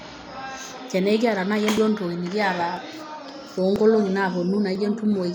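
At 0.78, 1.77, 2.77, 3.76 and 4.75 s the speech skips very briefly, losing well under 10 ms with no silent gap. The exact one-second spacing, unlike random dropouts, marks audio missing between chunks, likely lost as each one-second block closed and the next opened.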